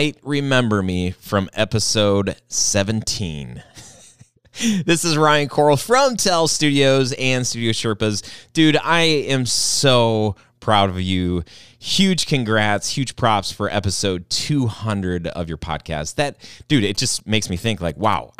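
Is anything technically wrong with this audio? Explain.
Yes. From 16.95 to 18.14 s, just after "dude it", GSM signalling bursts break into the speech. A nearby 2G phone is exchanging short groups of radio bursts with the network, and the audio circuitry rectifies that RF, turning its envelope into sound. The result is a galloping dit-dit-dit of short buzzes at 216.7 Hz, sitting roughly 25 dB below the speech for about 1.2 s.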